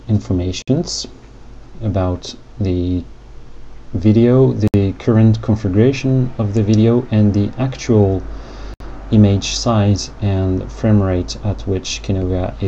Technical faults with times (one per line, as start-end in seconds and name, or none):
0.62-0.68 gap at a join of encoded pieces
4.68-4.74 gap at a join of encoded pieces
8.74-8.80 gap at a join of encoded pieces